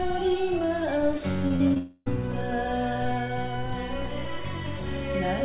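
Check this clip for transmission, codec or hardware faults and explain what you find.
Two transmission faults occur back to back, heard through a narrowband call path with nothing above 4 kHz, which fits G.711 mu-law.

From 1.48 to 1.77 s there is repeated packet loss (robotic sound). Four short gaps, the longest 38 ms, get patched by repeating the last sound. About a third of the stretch is concealed, so the sound turns choppy and robotic.

From 1.77 to 2.08 s the sound holds as a fading buzz, then goes briefly silent before returning. This is likely a long network dropout, with about 0.28 s of audio lost and filled in.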